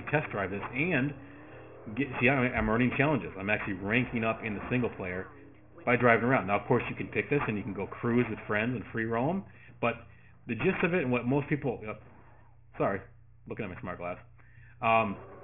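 Aliasing runs through the whole clip. The sound appears to have been cut down to a much lower sample rate, which fits a drop from 48 kHz to 6 kHz, without a low-pass filter first. Everything above 3 kHz therefore folds back below that point as false, unrelated tones, sitting somewhere around 15 dB under the wanted signal. The high end turns gritty and metallic, and the spectrum stops abruptly at 3 kHz.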